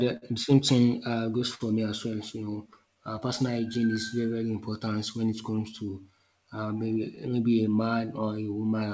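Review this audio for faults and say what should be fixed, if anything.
Clock drift between sender and receiver runs through the whole recording. The sending side's clock appears to run roughly five percent slow relative to the playback side, so the jitter buffer keeps draining instead of holding a steady level. The receiver therefore has to keep padding the stream, and the resulting small timing hiccups recur at uneven intervals for the full length of the speech. Prevention: lock both ends to a common reference, or apply continuous sample-rate compensation at the receiver.

Repeated timing corrections follow directly from that drift and span 0.04 s to 8.68 s. Playback runs at 97% speed, and the receiver stretches the material in small, unevenly spaced steps that all lengthen the audio. Together they add about a fifth of a second. Each step is slight. Prevention: compensate the drift smoothly through resampling rather than through discrete stretch-and-repeat edits.

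There are two short stalls from late packets, at 0.17–0.25 s and 1.55–1.63 s. In each case the buffer ran empty, and the receiver held the last sound for about 51–52 ms until the late data arrived. Playback then resumed from the same point, so nothing is lost, but a sound lingers too long with a slight buzz or dip. Prevention: size the jitter buffer adaptively so that it holds enough margin to absorb arrival delays of about 50 ms.

Scattered short gaps occur in two stretches. Between 2.73 s and 4.00 s there are around seven small holes, about 50 ms of concealment in total. Between 5.13 s and 5.80 s there are around three, about 20 ms in total. The longest gap is about 10 ms, and each was bridged by continuing the preceding sound, which leaves brief ticks or smears. Because the audio passes through a G.722-type call codec, content also stops at 8 kHz. Prevention: stabilise the network path or add forward error correction.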